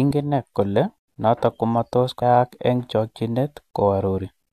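At 2.21 s there is damaged data in the compressed stream: a short stretch of the encoded speech arrives corrupted, so the decoder cannot read the frame it lands in, loses its place in the bitstream and has to hunt for the next valid frame header before output resumes. The result is a very brief chirp, squawk, click or short hole, lasting under 20 ms, that cuts across the speech and has nothing to do with the sound around it.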